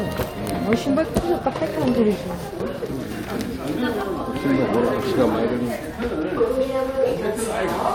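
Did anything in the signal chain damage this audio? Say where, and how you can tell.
No, nothing in the signal chain audibly damaged this audio; the signal shows no discontinuities, level faults or added noise at any point.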